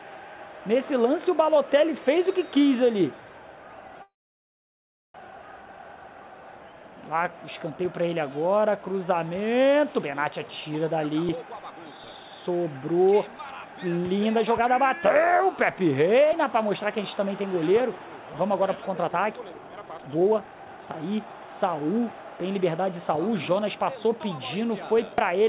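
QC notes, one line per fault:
4.02–5.16 s, call audio freeze: playback stalls for 1.14 s, decaying almost at once to about 1.05 s of silence, likely because delayed packets emptied the jitter buffer. Audio resumes where it stopped.
18.97–23.96 s, jitter buffer speed-up: audio runs about 23% fast at unchanged pitch as the receiver cuts short pitch-period segments, removing roughly a second to drain the excess delay.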